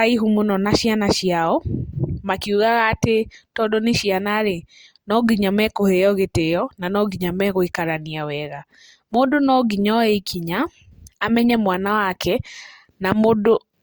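No technical faults can be heard anywhere in this speech recording.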